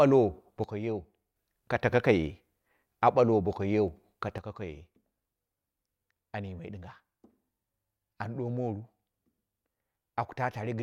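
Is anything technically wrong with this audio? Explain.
Yes. From 0.64 to 1.36 s, and again from 4.38 s to the end, the speech drops abruptly by about 6 dB. This is likely one channel dropping out before the mono sum, and it differs from a fade by its instant step.

At 3.88 and 8.79 s there are single sharp clicks, likely dropped samples, where the waveform jumps across a gap of only a handful of samples. Unlike a dropout, no sound goes missing.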